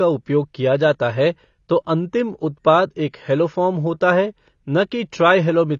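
From start to finish, the speech has likely been through AAC compression at a low bitrate, with AAC-LC squeezing each frame's frequency content into a very small bit budget, which fits a rate around 24 kbps. To save bits, the encoder cut off everything above 7 kHz and either left gaps in the remaining spectrum or filled them with stand-in noise. The damage is plainly audible: the speech sounds dull and smeared, with a warbling or fizzy edge on sustained sounds and sibilants.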